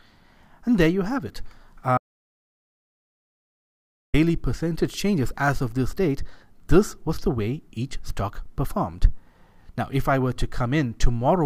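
An audio dropout to silence runs from 1.98 to 4.14 s, about 2.16 s of sound simply missing. Unlike a natural pause or a gated quiet passage, the gap holds no room tone at all, just silence, which likely points to lost input or a failed link.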